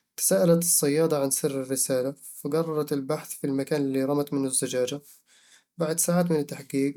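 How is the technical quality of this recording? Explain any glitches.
No glitches or technical faults can be heard anywhere in the recording.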